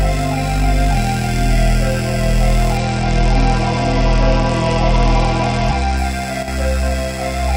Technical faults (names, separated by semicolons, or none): Bluetooth SBC bit pool drop; one channel drops out